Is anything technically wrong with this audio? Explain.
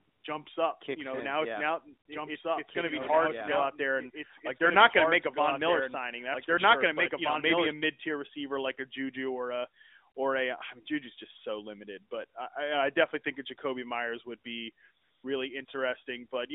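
Yes. Two faults affect this speech, both heard through the narrow 250 Hz to 3.7 kHz band of an AMR-NB mobile call at 12.2 kbps.

AMR comfort noise appears from 0.00 to 0.24 s, before "jumps up"; from 15.02 to 15.24 s, after "would be"; and from 15.66 to 15.68 s. In each case the phone decided the talker was silent and stopped sending speech frames, so the receiver filled the gap with synthetic noise. The real background gives way to a smooth, steady hiss that switches in and out.

A doubled audio track runs from 2.12 to 7.72 s, between "in now yeah now" and "mid tier receiver like". A second copy of the audio, most likely from a slower capture path or a misaligned edit, trails the original by about two seconds at roughly equal level. It sounds like a dry repeat, with no decay or room colour, and it starts and stops abruptly.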